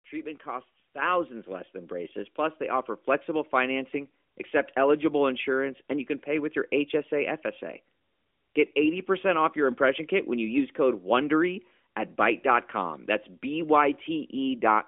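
At 1.02 s, just before "less than", the speech and the room behind it jump louder together by about 6 dB, and at 2.04 s, between "less than" and "plus they offer", they jump again by about 3 dB. Both are microphone volume stepped up: the call software judged the input too quiet and raised the device's input volume in a single step each time. The narrowband mobile-codec sound, limited to roughly 250 Hz to 3.5 kHz, carries both jumps through unchanged.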